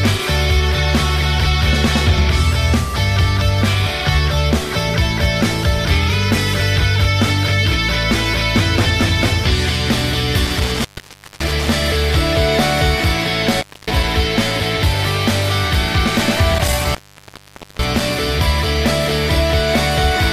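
Around 10.45 s the audio starts dropping out in bursts, and it's classic intermittent contact: a loose plug or cable briefly losing connection. The 10.45 to 11.72 s stretch has an open of about 0.56 s, 13.45 to 14.03 s loses about 0.26 s, and 16.55 to 18.18 s has the longest gap at about 0.84 s. Each one crackles as the contact breaks and remakes, with the signal gone in between.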